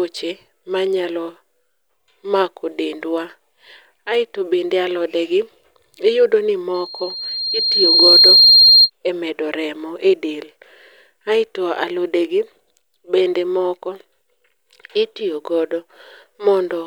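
A microphone in this speech recording is picking up its own loudspeaker, producing loudspeaker feedback squeal from 6.74 to 8.9 s: after "iyudo ni", a 4.2 kHz tone swells over roughly a second and a half to about 10 dB above the speech, ending before "e medo remo".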